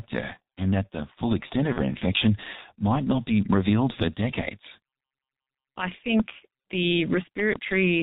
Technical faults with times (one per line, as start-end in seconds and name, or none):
0.00-8.03 G.723.1 codec
1.73-1.78 VoIP packet loss concealed by the speech codec
7.40-7.58 loud pop